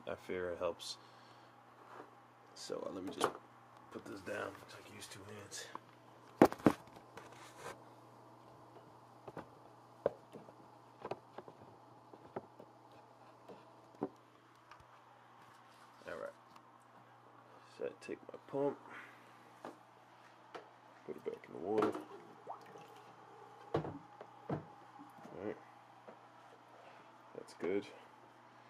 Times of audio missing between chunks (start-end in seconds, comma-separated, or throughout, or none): none